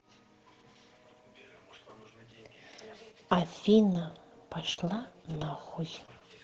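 Between 3.93 and 6.23 s the speech shows scattered short gaps: about four brief packet losses, each no longer than roughly 40 ms, together about 100 ms of missing audio. The receiver concealed each hole by extending the preceding sound, so the speech stays intelligible but picks up small ticks, smeared syllables and hiccups. The patching slightly stretches timing, adding about 6 ms. Audio passes through the call codec band-limited at 8 kHz.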